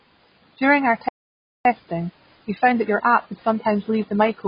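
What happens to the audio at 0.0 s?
From 0.0 s to the end, the speech carries AAC compression, likely AAC-LC coding at a very low bitrate, one that fits 16 kbps. The encoder discards everything above 5.1 kHz and quantises the rest coarsely, so the speech sounds dull and smeared, with warbling, fizzy sibilants.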